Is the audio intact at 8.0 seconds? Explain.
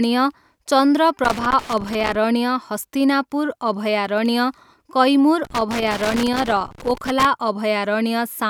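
Yes, the speech at 8.0 seconds plays through intact, with no dropout, click, distortion or other fault at that point.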